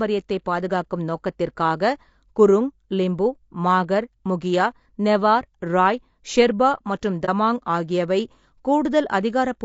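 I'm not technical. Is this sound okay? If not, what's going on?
No, it isn't quite right. The whole recording has a rough, grainy edge, with a hiss sitting between the tones of the voice and a top end that sounds thin and a bit artificial. That is most likely low-delay AAC compression, the kind video-call apps use. It chops the sound into very short slices so the conversation feels instant, but squeezed this hard, it can't keep the voice clean, so fine detail turns to grit.

Then, at about 7.25 to 7.29 s, just after "நெவார் ராய் ஷெர்பா மற்றும்" and right before "தமாங் ஆகியவை", there's a brief hole. That's AAC frame loss with muting. One small chunk of audio, about 30 ms, never arrived, so the player filled it with silence. Because the surrounding audio fades down into the gap and back up out of it, you hear a soft dip.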